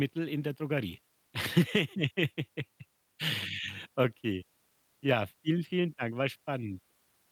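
No technical faults can be heard anywhere in the speech recording; the signal stays steady and intact throughout.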